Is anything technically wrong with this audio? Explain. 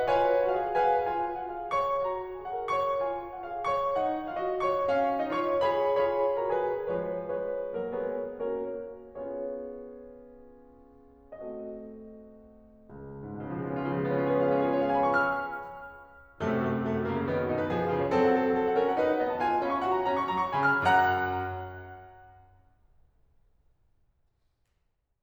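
No, nothing in this music stood out as technically wrong on listening.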